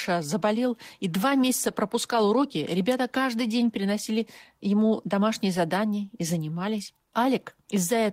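No technical faults can be heard anywhere in the recording.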